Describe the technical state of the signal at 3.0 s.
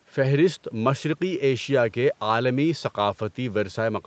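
At 3.0 s the speech is intact, with no fault audible, only the usual call-path band limit that leaves nothing above about 8 kHz.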